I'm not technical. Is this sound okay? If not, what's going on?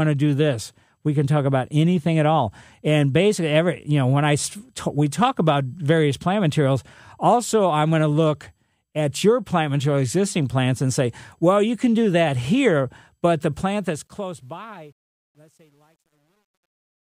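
No. From about 13.53 s, right after "that here but the", the speech fades out, but instead of growing smoothly quieter it turns gritty and rough. From about 14.71 s to the end at 17.17 s it is at its worst. This is truncation distortion on a fade. The volume stage drawing the fade keeps too few steps of loudness, which points to roughly 10 bits. The quietest part of the sound gets forced into coarse jumps.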